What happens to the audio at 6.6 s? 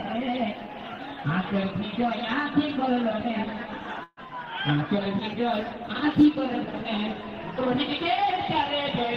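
Nothing goes wrong at 6.6 s; the audio plays through that moment intact, with no dropout, click, distortion or other fault.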